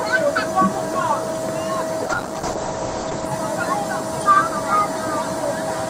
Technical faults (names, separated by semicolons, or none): noise suppressor applied to music or sounds; call bitrate drop